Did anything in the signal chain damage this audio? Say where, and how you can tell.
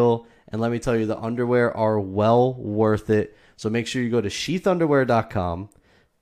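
No, nothing along the chain has left a mark on this speech that a listener could pick out, so there's no damaged stage to point to here.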